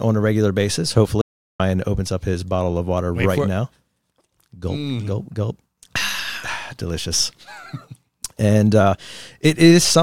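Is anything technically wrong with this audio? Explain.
Yes. From 1.21 to 1.60 s, just after "a regular basis" and before "opens up his bottle", there is an audio dropout to silence: about 0.38 s of silence. The input was likely lost briefly while recording continued. Unlike a natural pause, no room tone remains, and the speech cuts off abruptly.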